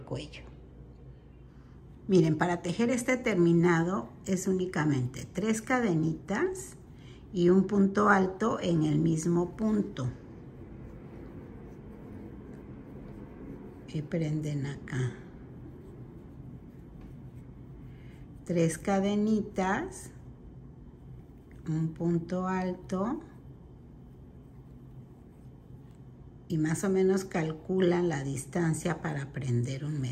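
No technical faults can be heard anywhere in the recording. There is nothing in the audio to point to or describe.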